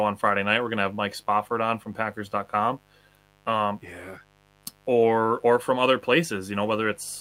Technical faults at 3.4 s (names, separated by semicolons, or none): mains buzz